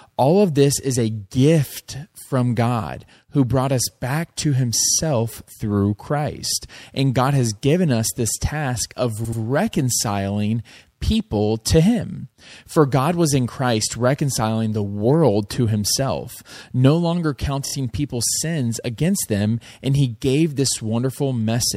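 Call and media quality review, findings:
Repeated frames, speech stutter. 4.80 s after "brought us back to": 52 ms block played twice more. 9.24 s after "us this task of": 78 ms block, two extra plays. 17.65 s after "to himself no longer": 26 ms block, three extra plays. Blocks fit duplicated 26 ms codec frames.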